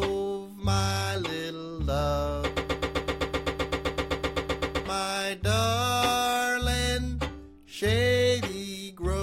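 From 2.57 to 4.86 s a broken-record loop takes over: a 128 ms fragment repeats exactly, back to back, 18 times, likely because the player or stream stalled on its last buffer. Unlike an echo, the repeats never decay, and the intended audio is lost.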